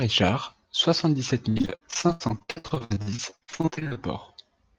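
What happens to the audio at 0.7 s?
Nothing goes wrong at 0.7 s; the speech there passes intact through the call path, with only the ordinary coding character of a call codec.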